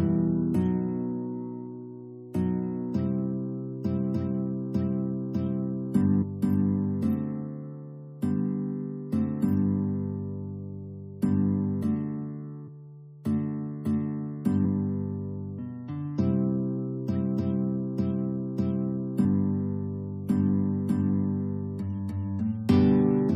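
Damaged data in a compressed stream shows up twice, first from 6.21 to 6.23 s and again at 19.24 s. At both points part of the encoded data is corrupt, so the decoder misreads or rejects the affected frames, loses its lock on the stream and has to hunt for the next valid frame header before playback resumes. Each event is heard as a short blip or chirp, the first lasting about 22 ms and the second about 10 ms.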